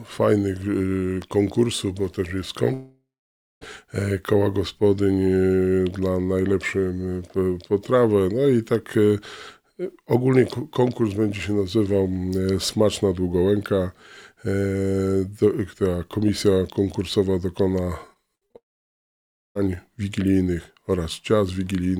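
At 1.22 to 1.24 s there is a loud pop, a single sharp click peaking a few decibels above the surrounding sound, which continues unbroken beneath it. That continuity is what separates it from a dropout. Nothing is missing; an impulse has been added on top. The likely cause is a brief voltage step, such as a switch, a connector or static discharge, that the downstream circuitry shaped into one short transient.

From 2.73 to 3.63 s comes a long network dropout. About 0.88 s of audio never arrived. The receiver first extends the last sound as a fading buzzy tail, then falls to silence for roughly 0.58 s before the audio resumes further along with that section gone. The likely cause is a stall in the stream's delivery. Unlike the pop, the signal itself disappears here.

Between 18.13 and 18.56 s, repeated packet loss gives a robotic sound. Four short gaps, the longest 59 ms, are each patched by repeating the preceding fragment, so about 30% of that stretch is synthetic fill. 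The result is choppy rather than silent, which distinguishes it from a long dropout.

This run leads straight into a second long network dropout from 18.56 to 19.57 s. Roughly 0.98 s is lost, almost all of it, about 0.94 s, heard as silence after only a brief concealment tail.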